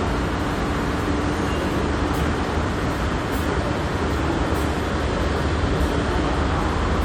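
No technical faults can be heard in this audio.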